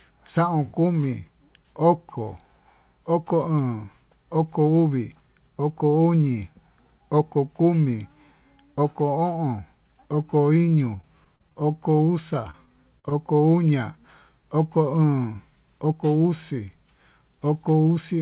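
From 10.69 to 11.57 s, repeated packet loss (robotic sound): seven dropouts, the longest 39 ms, each patched by extending the preceding sound, so the speech turns choppy, with pieces missing. On a spectrogram the harmonics smear into repeated, frozen bands. At 11.97 to 12.01 s a short concealed packet loss fills a 20 ms hole, heard as a brief smear and seen as a slightly flattened, too-regular patch in the waveform. From 12.51 to 13.13 s the robotic packet loss returns, with four gaps of up to 42 ms and the same frozen-band look. Throughout, the spectrogram shows nothing above 4 kHz, which fits a narrowband call codec such as G.711.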